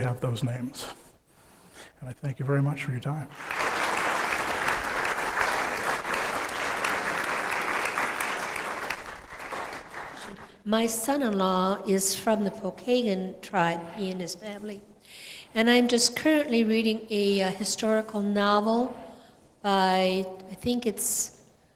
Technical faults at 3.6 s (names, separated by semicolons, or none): skip ahead